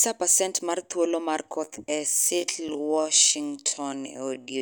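At 1.62 s the speech was likely run through a time-stretch that slowed it to about 0.55 times its pace, keeping pitch by repeating short pieces. This time-stretched section continues to the end, sounding abruptly slower at unchanged pitch.

At 2.68 s the audio cut out for about 2.9 ms, which fits a 128-sample block, so the signal dropped to silence. This block of digital silence has hard edges with no fade, heard as a brief tick.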